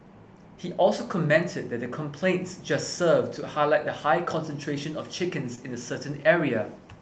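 Around 5.55 to 5.59 s there's a short concealed packet loss: roughly 20 ms of the call arrived too late, so the decoder patched the gap by extending the preceding sound, then blended back. You hear a quick smear or wobble in the speech, over a call path whose 8 kHz band limit points to Opus at about 24 kbps.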